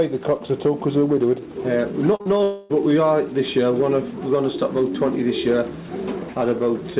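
Brief smears and wobbles at 2.16 to 2.27 s and again at 2.37 to 2.41 s are short concealed packet loss: the receiver bridged roughly 80 ms and 20 ms gaps by extending the preceding sound. From 2.43 to 2.71 s the audio turns into a continuous synthetic buzz or hiss for about 260 ms with no silence, likely a long network dropout that concealment covered completely. Throughout, the call path cuts everything above 4 kHz, which fits G.711 A-law at 64 kbps.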